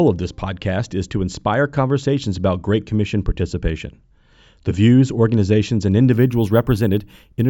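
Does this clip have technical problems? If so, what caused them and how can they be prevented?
Yes. From 6.13 s to 7.49 s, after "views organizations and", a bright metallic fizz tracks the speech: imaging from sample-and-hold upsampling. Repeated samples left a mirrored band from 8 kHz to 16 kHz, about 28 dB down, which fits a 16 kHz to 48 kHz conversion. Resampling with a proper interpolating low-pass filter prevents it.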